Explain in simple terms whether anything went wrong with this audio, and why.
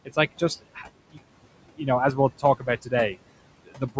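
The background noise drops away between the words and swells back under the talking. These are noise suppressor artifacts: a call's noise filter cuts whatever it judges to be steady noise.

Parts of the speech also sound swallowed or faint, at 0.05–0.18 s just before "like just", at 0.61–1.2 s right after it, and at 1.76–1.88 s, 2.39–2.93 s and 3.65–3.98 s. This is speech cut by the noise suppressor, which mistook those quieter sounds for noise.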